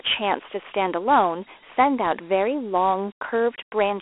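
Dialogic VOX ADPCM throughout: coarse 4-bit steps, consistent with 32 kbps, leave gritty hiss trailing the speech in a 300 Hz to 3.4 kHz band, empty above 3.8 kHz.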